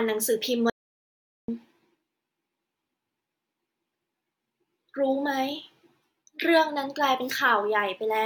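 At 0.70 s the speech cuts off abruptly into total silence. The gap lasts about 0.78 s, until 1.48 s, when the voice returns mid-flow. This is an audio dropout to silence. No room tone or hiss fills the gap. That points to the input signal being lost while recording carried on. A disconnected device or failed link is the likely cause. Whatever was said in that stretch is gone.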